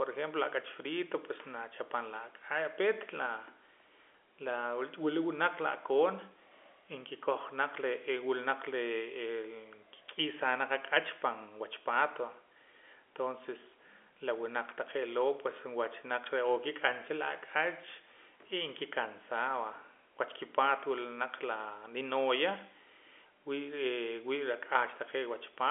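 No technical faults turn up anywhere in this speech recording.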